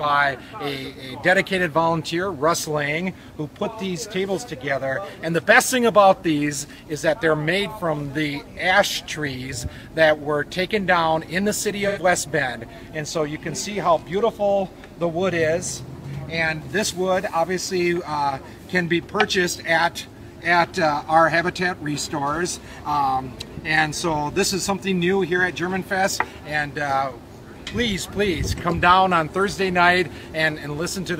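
At 11.87 s the audio breaks into a brief smeared, noisy patch, covering about 85 ms of lost audio, until 11.98 s. This is AAC frame loss with concealment. Part of the coded stream went missing, and the length fits two lost frames. The decoder covered the gap by reusing the last good spectrum with altered phase and energy. That is why the passage sounds blurred and phasey rather than silent.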